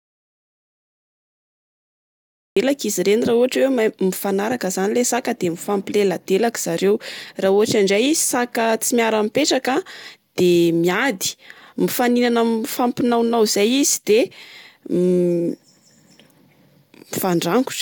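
From the very start until about 2.57 s there's an audio dropout to silence. The speech is already cut out when the clip begins, and the gap is silent, with no room tone or hiss at all. The speech then cuts in mid-flow at 2.57 s. The likely cause is the input dropping out, say a disconnected device, a failed link or an accidental mute, while the recorder kept writing silence. Whatever was said in that stretch is lost.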